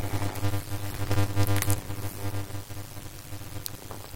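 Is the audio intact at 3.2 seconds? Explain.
No. At 3.24 s there are compressed frames skipped: roughly 150 ms of audio, around seven frames of 21.3 ms, is never played. The speech jumps ahead at that point.

That moment also carries the block size mismatch (padded) that runs through the whole clip. Each block is shorter than the stage reading it expects, which fits 256-sample blocks padded with zeros to about 480. The silent gaps produce a 100 Hz buzz, and the speech plays at 0.533 times normal speed while keeping roughly its normal pitch.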